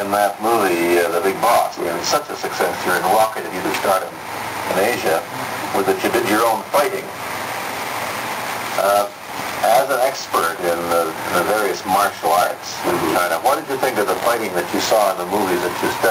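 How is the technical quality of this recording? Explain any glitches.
The technical quality is poor because of gain pumping throughout. The gain swings by about 15 dB, pulled down under each loud sound. This is likely from gain set far too high, with a fast limiter clamping it. On a waveform the envelope looks flattened, and on a spectrogram the noise floor brightens and darkens in bands between sounds.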